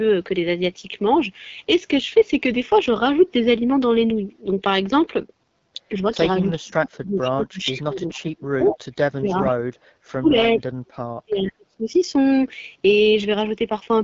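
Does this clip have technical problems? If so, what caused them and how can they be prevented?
Yes. Three kinds of fault are audible.

The AMR wideband (HD Voice) codec is plainly audible throughout. The speech sounds rough and raspy, and nothing is present above 7.3 kHz. That roughness points to one of the two lowest AMR-WB modes, which fits 8.85 kbit/s. At that rate the pulse-driven vocal tract model has too few bits to shape the excitation cleanly below 6.4 kHz. Prevention: allow the link to negotiate 12.65 kbit/s or higher.

Speech suppressed in double talk occurs from 6.59 to 10.36 s and again from 10.55 to 11.94 s. The talker's level dips sharply, at worst by around 40 dB, and parts of the speech thin out or drop away. The likely cause is that both ends spoke at once and the echo canceller, unable to separate the near talker from the loudspeaker echo, attenuated both. Prevention: use an echo canceller with proper double-talk detection rather than heavy suppression.

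Echo leak is heard as a delayed copy of the voice arriving 422 ms late. It appears briefly at 7.23 s, from 7.62 to 7.83 s, from 8.68 to 8.77 s, and from 11.45 to 11.51 s. The copies range from fairly strong, about 10 dB below the speech, to faint, about 25 dB below. The likely cause is a loudspeaker at the far end whose echo canceller did not fully remove what its microphone picked up. Prevention: use a headset or a better-tuned far-end echo canceller.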